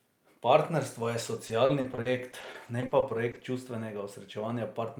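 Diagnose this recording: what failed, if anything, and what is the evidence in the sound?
Network stage: repeated packet loss (robotic sound) from 1.35 to 3.44 s. The speech turns choppy across this stretch, with 19 short holes, none longer than 50 ms, totalling 390 ms, about a fifth of the span. Each hole is bridged by extending the preceding sound, which gives the robotic texture. This separates it from a driver or buffer underrun, where gaps fall silent or click rather than being smoothly stretched over.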